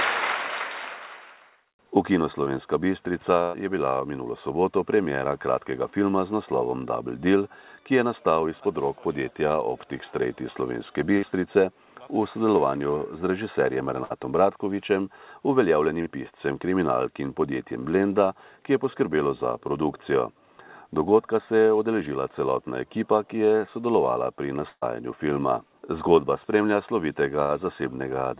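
Audio arrives over a call path band-limited to nothing above 4 kHz, which fits narrowband G.711, and it is broken up by two kinds of loss. Short concealed packet loss occurs at 2.44 s (about 20 ms missing) and 16.02 s (about 40 ms): audio failed to reach the decoder in time, so the receiver extended the preceding sound and blended back, leaving a brief smear or wobble. Bursts of packet loss, where a longer run of audio was lost or arrived too late, occur at 3.42–3.56 s, 11.18–11.24 s, 14.04–14.12 s, 24.70–24.84 s and 27.44–27.52 s, with about 120, 40, 60, 120 and 60 ms missing. In each, the receiver stretched the last sound into a held buzz or hiss that fades, and at 24.70 s the final 40 ms goes silent before the audio resumes further on with the material in between gone.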